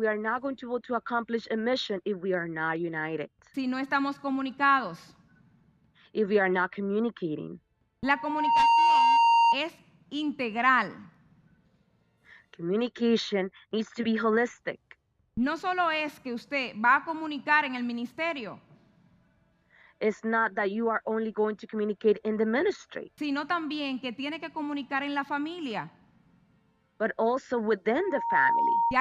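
A microphone picked up the loudspeaker it was feeding, causing loudspeaker feedback squeal: a 930 Hz tone swells over roughly half a second at 8.04 s, ending at 9.58 s about 10 dB above the audio, then returns, softer, from 27.96 to 28.97 s.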